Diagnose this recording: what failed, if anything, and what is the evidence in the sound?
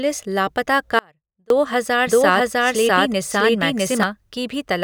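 A buffer stall likely caused this audio dropout to a faint residue: from 0.99 to 1.50 s, speech cuts abruptly to sound about 35 dB down.

A slower second capture path likely got mixed in: from 2.07 to 4.03 s, a doubled audio track repeats speech about 0.7 s later, equally loud.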